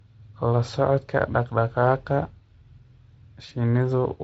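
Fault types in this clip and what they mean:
VoIP packet loss concealed by the speech codec: around 3.49 to 3.53 s the speech briefly smears into a faded stretch. About 20 ms of audio went missing, which fits one lost frame, and the decoder filled the gap by repeating its last pitch and filter at falling gain.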